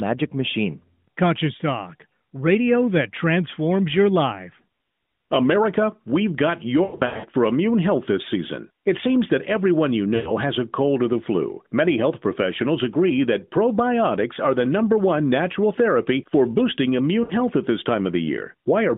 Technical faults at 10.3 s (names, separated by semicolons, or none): lost AMR speech frames